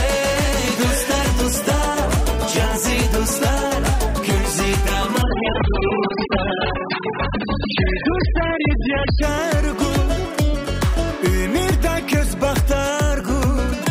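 Adaptive stream at a lower bitrate, 5.22 to 9.22 s: the stream switches abruptly, without a gap, to a much leaner encoding, cutting everything above 5 kHz and adding smeared codec artefacts.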